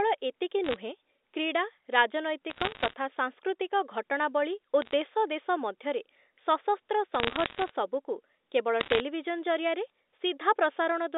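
Speech over a G.711 A-law phone line carries bit errors in five bursts: 0.64–0.76 s, 2.5–2.94 s, 4.82–4.93 s, 7.15–7.69 s and 8.8–9.0 s. Flipped bits, roughly 0.7 to 1.5 in a hundred, corrupt single samples and produce sharp ticks and crackle. The voice underneath stays intact, unlike dropouts or clipping.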